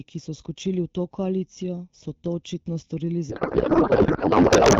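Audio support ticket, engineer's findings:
Channel delay (comb filtering), whole clip. Hollow, phasey tone with fixed notches, the first around 1.5 kHz and the rest evenly spaced above it. Probable cause: one channel running a fraction of a millisecond late before the mono sum. Unlike codec band-limiting, the notches sit in place from start to end and the top end is still present.

Codec payload misread, 3.30 s to end, right after "to očitno storili". Speech gives way to garbled noise and warble that barely tracks the original. Probable component: AMR payload packing, which fits octet-aligned frames being parsed as bandwidth-efficient. Not packet loss: no gaps or concealment fades, just continuous garble. Not low-bitrate roughness either, since the AMR-WB path at 12.65 kbit/s is clean before the onset.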